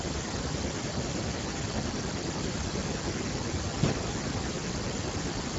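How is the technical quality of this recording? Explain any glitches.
Quality's fairly rough. The speech has been squeezed through the Speex codec, and the damage is plainly audible from start to finish. At what sounds like a low setting, around 10 kbps, the codec has very few bits to describe the excitation behind each stretch of speech, so it comes out grainy and hoarse. Everything stops dead at 7.7 kHz, and what sits above about 4 kHz is just shaped hiss standing in for real detail.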